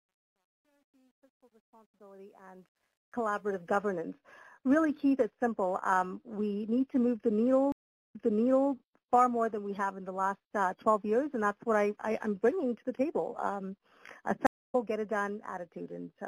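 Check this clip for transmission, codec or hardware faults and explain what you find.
Two kinds of fault are audible: truncation distortion on the opening fade-in, and two stream reconnects later on.

Truncation distortion on a fade runs from 0.0 to 3.75 s, worst between 0.0 and 2.32 s. The gain stage keeps too few bits and adds no dither, which fits an 11-bit stage. At the lowest levels the waveform collapses into coarse square steps, so the sound comes in gritty. It smooths out as the level rises. Unlike codec artefacts, the grit follows level, not content.

A stream reconnect spans 7.72 to 8.72 s. After about 0.4 s of silence, playback resumes 0.6 s earlier than where it stopped, as if the server resent a burst, so a short stretch is heard twice. A second reconnect at 14.47 to 14.75 s has about 0.24 s of silence and resumes roughly 0.3 s later, skipping material. In both cases a fresh decoder starts mid-stream. 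The silence plus the jump in position tells these apart from a plain dropout.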